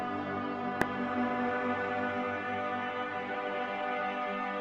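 Damaged data in a compressed stream at 0.82 s: corrupted bytes there make the decoder misread that frame and lose sync, leaving a brief glitch in the audio.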